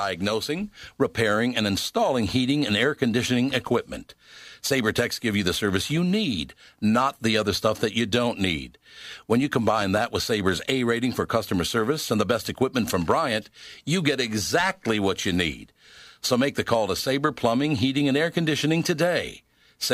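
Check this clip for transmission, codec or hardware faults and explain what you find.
One fault turns up: a loud pop at 9.82 to 9.99 s, heard as two sharp thumps in quick succession, roughly 10 dB above the speech, which carries on beneath them. The likely cause is a voltage spike from static or a switch, shaped by the following circuitry.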